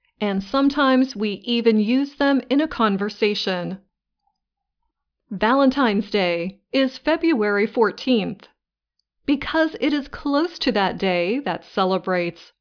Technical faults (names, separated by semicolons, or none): none